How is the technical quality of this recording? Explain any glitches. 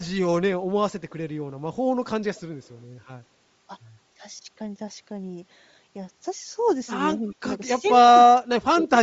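The recording has clear technical problems: codec damage throughout, brief echo leaks, and two dips in the speech.

Bluetooth LC3 compression runs through the whole clip and is plainly audible. The likely cause is the LE Audio transform codec at a low rate, which fits roughly 32 kbps in 10 ms frames. To save bits, the encoder discards much of the upper spectrum and fills those bands with synthetic noise. The speech therefore has a grainy, breathy edge rather than clean high frequencies.

Echo leak appears three times: at 2.35 to 2.41 s, at 2.65 to 2.69 s, and at 7.28 to 7.33 s. The delay is 232 ms each time. The likely cause is a loudspeaker on the far end whose echo canceller left part of the returning signal in its microphone feed. What you hear is a faint, delayed copy of the speech, far quieter than the direct sound, in short scraps. The second leak is the weakest.

Speech suppressed in double talk occurs at 7.2 to 7.45 s and at 7.71 to 7.91 s. 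It likely comes from the echo canceller mistaking simultaneous talk for echo and turning everything down. In the first stretch, about 100 ms of speech dips by as much as roughly 20 dB, overlapping the third echo leak. In the second, about 150 ms drops by roughly 10 dB. The speech audibly sinks.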